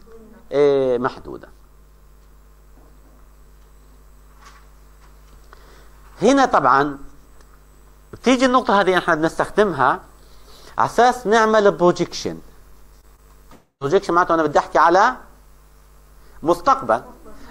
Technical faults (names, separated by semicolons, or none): short concealed packet loss; long network dropout